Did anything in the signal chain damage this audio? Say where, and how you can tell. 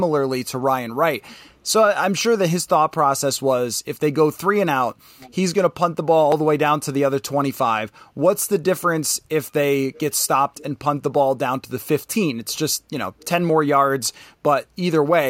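Yes. Faint delayed repeats come in at 5.18–5.35 s, 9.93–10.00 s, 10.17–10.25 s, 10.56–10.63 s and 13.19–13.26 s. Each trails the speech by about 446 ms and sits about 25 to 35 dB below it. This is an echo leak, most likely from call processing, where a far-end loudspeaker's echo canceller let part of its microphone pickup through. On a spectrogram it shows as a weak, blurred copy of the harmonic bands, shifted roughly 0.45 s later.

At 6.32 s there is a small jump in the sound and no silence. This points to a dropped buffer (overrun) at the driver or buffer stage, likely caused by samples being overwritten before the program read them. About 5 ms of audio is gone. On the waveform the two ends meet in a sharp step. On a spectrogram it shows as a thin vertical broadband line.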